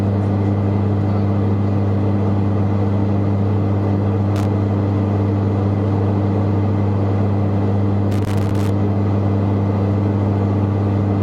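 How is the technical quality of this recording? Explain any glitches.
Two bursts of loose connector crackle mar the recording, at 4.36 to 4.46 s and 8.12 to 8.70 s. A worn contact intermittently chops the signal. Unlike evenly spaced digital clicks, these sound like irregular, scratchy bursts that vary in density.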